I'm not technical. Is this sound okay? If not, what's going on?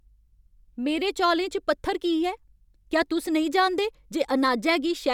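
Yes, this speech recording is technically sound, with nothing wrong in how the signal was captured or carried that would get in the way of listening.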